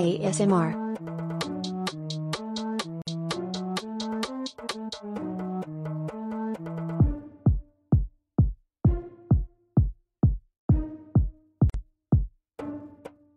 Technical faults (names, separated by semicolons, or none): gap at a join of encoded pieces